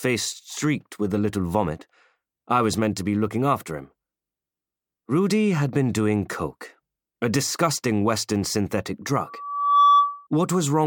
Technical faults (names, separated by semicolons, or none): loudspeaker feedback squeal